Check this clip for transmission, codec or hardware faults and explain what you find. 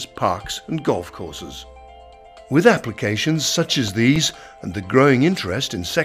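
There's one fault here: CD scratch ticks between 3.74 and 4.43 s. Six short ticks, the longest just a few milliseconds, come once per disc turn where a scratch wiped out more data than error correction could rebuild, so the player patched or muted those samples.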